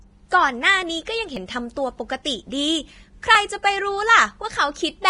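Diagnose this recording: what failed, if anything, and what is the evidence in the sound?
Codec stage: the speech carries heavy Vorbis compression damage throughout, with grainy, hissy treble and nothing above 10.6 kHz. The low-pass and coarse quantisation of the upper band fit a low bitrate near 29 kbps, most likely from Vorbis encoding.

Buffer stage: audio missing between chunks shows as abrupt skips at 1.37 s and 3.35 s, about 2.0 s apart, each losing roughly 15 ms with the two sides butted together. The regular spacing points to a chunked recorder or processor, likely dropping samples at each handover.

Codec stage again: pre-echo appears before attacks at 2.24 s and 3.63 s, as a brief hiss spread over 15 ms and 17 ms respectively. The transform block's quantisation noise, sized for the loud onset, leaks into the quiet moment preceding it and softens the attack.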